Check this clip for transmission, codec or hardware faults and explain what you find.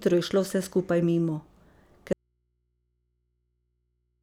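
One fault: an audio dropout to a faint residue from 2.13 s to the end. The speech cuts off abruptly, leaving only mains hum roughly 50 dB below the signal. The likely cause is a lost upstream connection while the downstream input stayed live and open.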